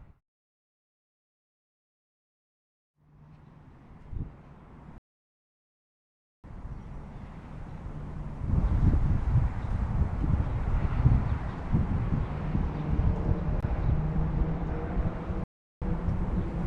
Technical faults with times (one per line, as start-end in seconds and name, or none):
4.98-6.44 rebuffering stall
15.44-15.82 rebuffering stall